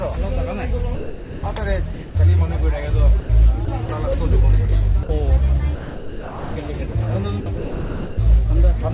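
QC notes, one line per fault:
0.95–1.43, 1.94–2.15, 3.20–3.29, 5.03–5.09, 5.75–6.56, 6.92–6.95 s, sound dropped by the voice detector: the sound gives way to steady synthetic noise for 30 to 810 ms, longest at 5.75 s, then returns. The likely cause is the sender's detector judging the sound as background and stopping transmission, with comfort noise filling in.
3.65–3.89 and 7.40–8.18 s, sound chopped by the voice detector: the sound breaks up into holes filled with comfort noise, totalling 60 ms in the first stretch and 660 ms in the second. This is likely the sender's detector switching on and off repeatedly.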